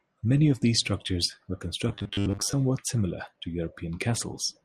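Right after "of these structures were", from 1.89 to 2.54 s, there's robotic sound from repeated short buffers: a rigid 100 Hz metallic buzz, likely from most of the audio being replaced by looped 10 ms chunks.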